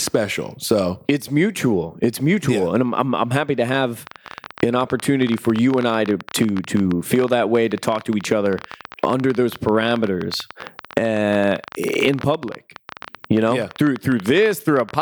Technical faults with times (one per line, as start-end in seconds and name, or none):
3.69-14.95 train of clicks